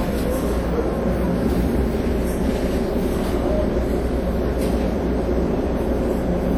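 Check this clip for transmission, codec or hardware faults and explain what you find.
One fault runs through the whole clip. WMA compression, throughout: a long-block transform codec, likely at a low bitrate near 48 kbps, smears quantisation noise, giving plainly audible washy ringing and breathing hiss.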